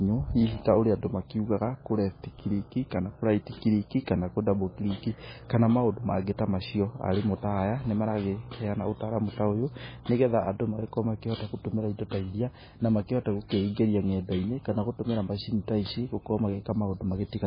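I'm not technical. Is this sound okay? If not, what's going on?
No. All the way through, the speech sounds dull and muffled, as if the top has been shaved off, with nothing above about 5 kHz, so s and t sounds lose their crispness. It also has a watery, swirly quality, and the starts of sounds come out smeared. This is likely heavy MP3 compression: squeezed too hard, the file dropped its highest sounds and flickered quieter details on and off.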